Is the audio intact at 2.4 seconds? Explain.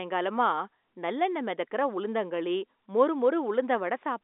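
Yes, the audio at 2.4 seconds is intact, with the speech carried through G.711 telephone coding in its usual narrow band of roughly 250 Hz to 3.6 kHz and nothing above 3.8 kHz.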